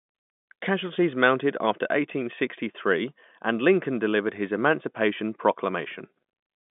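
No technical faults can be heard anywhere in the speech, which carries the narrow band of a G.711 telephone line.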